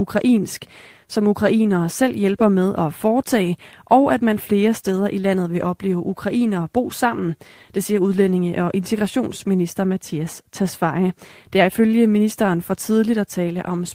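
Clock drift between sender and receiver runs through the whole recording: the sending clock runs about 2% slow, so the receiver's buffer keeps draining. On a waveform the speech envelope gradually falls behind its natural pacing, with no single visible break marking the problem.

Repeated timing corrections follow from that from 0.39 s to 13.76 s. The receiver repeatedly duplicates short pieces to stay fed, adding roughly a third of a second overall. The delivery plays at 98% of its natural rate, with faint hiccups and an unsteady tempo. A spectrogram shows small, unevenly spaced seams where brief slices recur.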